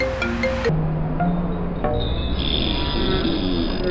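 From 0.69 s to the end, the sound drops sharply and drags, running at a third of its proper speed and about 19 semitones lower. This is a wrong sample rate fault, with playback far slower than recording and no conversion, which fits 48 kHz audio played at 16 kHz.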